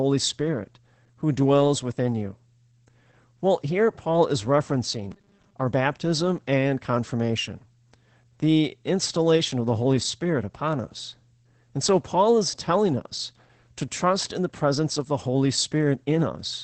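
Across the whole clip the speech is muffled and hoarse, with a slightly synthetic edge, and nothing reaches above about 8.6 kHz. This is Opus voice compression running in its SILK linear-prediction mode at wideband. At the low rate this damage suggests, plausibly around 12 kbps, the coder cuts the top of the spectrum and represents the excitation coarsely. The result is a plainly audible dulling and roughness on every syllable.

From 5.11 to 5.54 s, just before "our baptism and confirmation", the speech hardens into a rigid, metallic buzz pitched at 200 Hz that still loosely tracks the syllables. This is robotic sound from repeated short buffers, likely caused by new audio arriving too late. The playback fills the gap by looping the last slice, and the 200 Hz pitch points to a 5 ms buffer. Roughly two-thirds or more of the real audio in that stretch is skipped.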